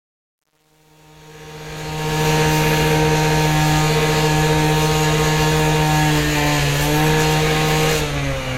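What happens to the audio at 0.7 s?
At 0.7 s the fade-in suffers truncation distortion on a fade (0.0–2.28 s, worst to 1.71 s): roughly 9-bit undithered steps turn the quiet sound gritty, showing square staircase waveforms and broadband spectrogram grit.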